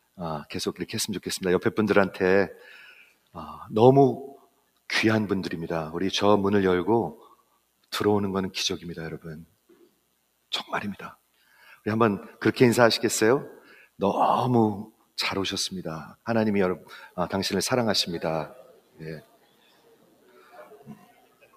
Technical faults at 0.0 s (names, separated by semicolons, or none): noise suppressor applied to music or sounds; sound cut by the noise suppressor